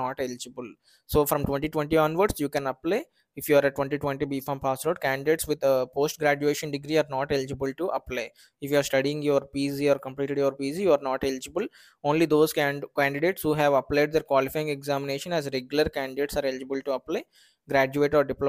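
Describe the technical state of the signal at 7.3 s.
At 7.3 s the signal is intact, with no audible technical fault at that moment.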